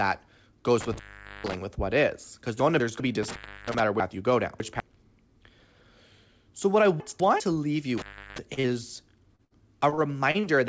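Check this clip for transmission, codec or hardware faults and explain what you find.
Several transmission and hardware faults appear, heard over a band that stops at 8 kHz, which fits a G.722 call path.

Intermittent contact, 0.80 to 1.57 s, 3.23 to 3.80 s and 7.97 to 8.38 s: the sound drops out with crackle at both edges for about 0.45, 0.32 and 0.34 s. A loose connection is briefly opening the line.

Chunks out of order, 2.6 to 3.0 s, 4.0 to 4.8 s and 7.0 to 7.4 s: short jumbled passages. Blocks of 200 ms play late, one block late in the first and last, three in the middle.

Short concealed packet loss, 8.54 to 8.60 s, 8.60 to 8.67 s and 9.36 to 9.42 s: brief smears or wobbles. About 30 ms went missing each time and was patched by extending the preceding sound.

Burst of packet loss, 9.45 to 9.54 s: the last sound is held and fades, then the audio resumes further on. About 60 ms was lost and bridged by continuing the last sound.

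Repeated packet loss (robotic sound), 9.90 to 10.46 s: a choppy stretch with pieces missing. Four gaps, the longest 34 ms, were each patched, so about a fifth of this span is filled-in sound.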